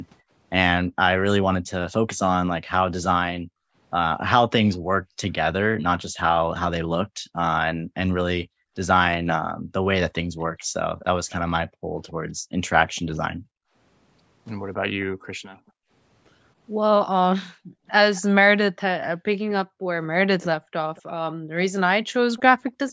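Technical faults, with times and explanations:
3.4 to 22.14 s, background gated by the echo canceller: The room sound repeatedly dips or drops out, by as much as about 36 dB and for roughly four seconds in total. The echo canceller clamps the microphone hard while the loudspeaker plays, then releases it.
4.73 s, 10.4 to 15.05 s and 18.15 to 22.92 s, echo leak: A delayed copy of the speech trails the original by 276, 250 and 223 ms. It is very faint in the first brief scrap and quieter than the speech in the two longer stretches. This is likely loudspeaker pickup that one side's echo canceller failed to remove.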